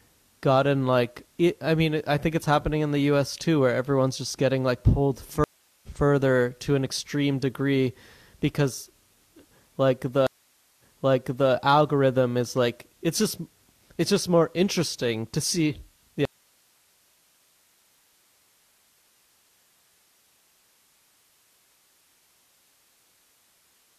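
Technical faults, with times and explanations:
5.44 to 5.88 s, stream reconnect: about 0.39 s of silence, then speech resumes roughly 0.4 s further on, as a fresh decoder picks up the live stream mid-flow.
10.27 to 11.51 s, stream reconnect: 0.52 s of silence, then the new decoder replays material from 0.73 s earlier, as the server resends a burst after the connection returns.
16.25 s to the end, audio dropout to a faint residue: speech cuts off abruptly, leaving only hiss about 40 dB down, likely a lost input while the path after it stayed live.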